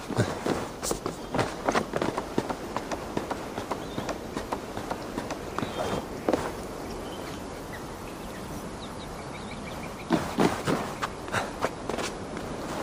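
No technical faults can be heard anywhere in the clip. Nothing along the way interrupts or disturbs the audio.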